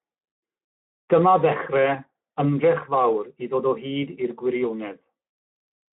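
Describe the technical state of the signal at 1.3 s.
Speex codec damage is present at 1.3 s, as it is across the whole clip. This CELP speech codec rebuilds the voice from a model plus a coded excitation, and at a low rate, which fits roughly 11 kbps, the excitation is starved of bits. The speech sounds plainly noisy and hoarse. It is confined to a telephone-like band of about 150 Hz to 3.4 kHz, with nothing above 3.8 kHz.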